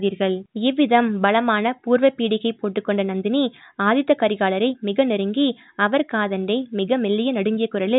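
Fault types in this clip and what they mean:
No faults are present in this speech recording.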